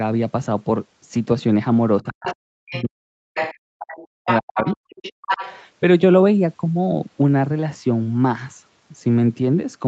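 A speech recording of a call in which the talker's voice dips sharply between 2.02 and 4.82 s, with roughly two seconds of that stretch affected and the deepest drops very large. This is speech suppressed in double talk, likely caused by the far side talking at the same moment so that the echo canceller could not separate the talker from the loudspeaker echo and turned everything down. The far side's voice is the other side's voice leaking through the microphone, heard at 2.07 to 2.36 s, 2.70 to 2.84 s, 3.34 to 3.55 s and 3.92 to 5.57 s. The early scraps sit well below the talker, while the later two come close to the talker's level. These fragments are most likely residual echo that the canceller failed to remove. These pieces arrive within the same band-limited, Opus-coded sound as the rest of the call (nothing above 8 kHz). At 5.13 s the room sound drops by about 40 dB for 150 ms and then returns. 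This is background gated by the echo canceller, which clamped the microphone while the loudspeaker was playing. It differs from a noise gate because it is tied to far-end playback rather than to the talker falling silent.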